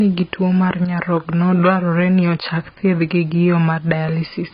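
Throughout the speech, a hiss-like roughness rides on louder and brighter passages and drops away in pauses: sample clock jitter, around a microsecond of timing wobble, leaving errors roughly 40 dB below the signal. Also throughout, the speech sounds dull and smeared, with nothing above 5 kHz and a warbling or fizzy texture. This heavy damage is likely from AAC compression, and it fits a low bitrate of about 16 kbps.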